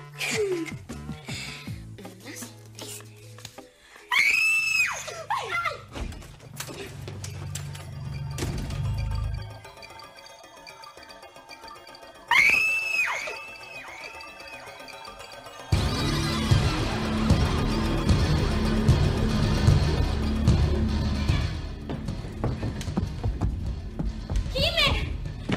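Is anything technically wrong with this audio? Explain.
Yes. From 0.11 s to 25.55 s there are clock slip clicks, single samples dropped or repeated about every 20 ms. That's likely two free-running clocks disagreeing by around a thousand parts per million, so the ticks blur into a soft, steady rattle under the louder sound.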